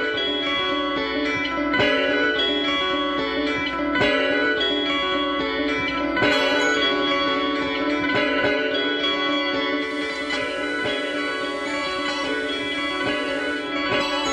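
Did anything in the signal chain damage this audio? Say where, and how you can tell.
Yes, at the receiver: digital radio blending to analogue FM from 9.75 to 13.77 s. A 243 ms crossfade, about 3 dB drop, plus hiss.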